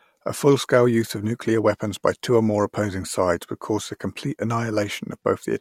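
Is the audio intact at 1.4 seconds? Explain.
No, not quite. At 1.4 seconds you're right at the tail end of a run of CD scratch ticks in this speech, spanning roughly 0.88 to 1.43 s. There are four ticks, each well under a millisecond, about seven per second, which lines up with the disc's rotation. A blemish wipes out more data than error correction can rebuild on each pass, so the player patches or mutes those samples, and you hear tiny regular clicks.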